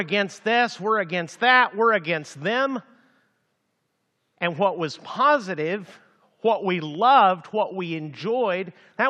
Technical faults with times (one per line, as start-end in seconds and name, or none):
none